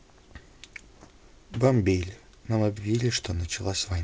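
Nothing faulty is heard in the speech; it comes through a call path with a wideband codec whose band stops at 8 kHz, which fits G.722 at 64 kbps.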